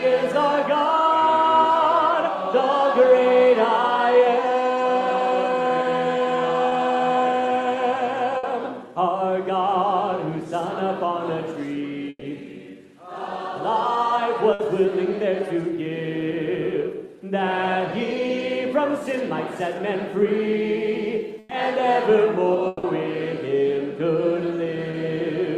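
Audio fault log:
6.69–6.73 s and 24.91–24.95 s, short concealed packet loss. About 20 ms of audio is missing each time. The receiver patched the gap by extending the last sound, then blended back into the real signal. The result is a brief smear or wobble, not a clean cut. A very short sound falling in the gap can vanish, with only the extension left in its place.
8.37–8.45 s, 12.09–12.23 s, 14.53–14.61 s and 21.39–21.51 s, burst of packet loss. Several packets in a row failed to arrive in time. The receiver extended the last sound over the gap and faded it. It sounds like a held buzz or a hiss that dies away. About 60 ms is filled at 8.37 s and 14.53 s, 100 ms at 21.39 s and 120 ms at 12.09 s. At 12.09 s about 40 ms of near silence follows before the sound resumes. The audio picks up further on each time, and the missed part is gone.
22.67–22.85 s, long network dropout. About 160 ms of audio is replaced by the last sound stretched out and fading. 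There is no silent stretch before the real signal returns. That part of the sound is simply gone. The cause is likely a brief loss of the network path rather than a few scattered packets. Because the gap is long, the extended sound is audible as an artificial drone or hiss before the audio jumps ahead.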